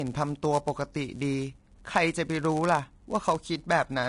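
From start to finish the speech carries a steady buzz at about 99.6 Hz, and it runs very slightly slow, at 0.996 times normal speed, with its timbre unchanged. This is a block size mismatch (padded). One stage hands over blocks a fraction shorter than the next stage expects, and the shortfall is filled with silence. That tiny gap, repeated in every block, produces the buzz at the block rate and stretches the timing by the ratio of the two block sizes.

Also present for the whole clip is a grainy, hissy texture. The fine treble detail turns to noise, the tonal parts sound roughened, and the onsets of sounds are smeared. Nothing is heard above 10.6 kHz. The damage is plainly audible and likely comes from Vorbis compression at a low setting, which fits a bitrate around 40 kbps. The encoder kept the broad spectral shape but quantised the treble so coarsely that its detail was replaced by noise of similar energy, and it cut the top band entirely.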